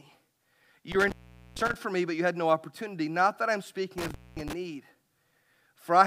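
A speech recording whose sound twice drops out with a crackle at each edge, around 0.92 to 1.76 s (open for about 0.44 s) and 3.98 to 4.53 s (about 0.22 s), leaving faint hiss. This is intermittent contact, a loose cable or plug briefly breaking the signal path.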